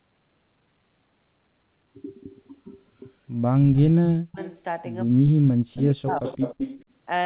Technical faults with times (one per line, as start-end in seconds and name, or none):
3.47-4.40 speech suppressed in double talk
4.41-4.58 echo leak
5.05-6.24 speech suppressed in double talk
5.73-5.82 echo leak
6.10-6.84 echo leak